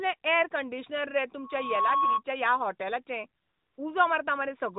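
At 1.44 s, just after "यॅरकंडिशनर रे", a loudspeaker feedback squeal begins. A microphone is re-hearing its own loudspeaker, and the loop gain exceeds one at 1.1 kHz. The tone swells over about 0.4 s to a few dB above the speech and stops at 2.23 s. Unlike a steady interfering whistle, it grows by itself.

From 3.42 to 3.78 s, the phone stopped sending speech frames for 360 ms and the receiver substituted AMR comfort noise. The real background drops out and is replaced by a smooth, even hiss that switches in and out. This differs from a dropout, which leaves silence, and from a codec warble, which swirls. The narrowband phone-band sound around it carries only light AMR-NB coloration.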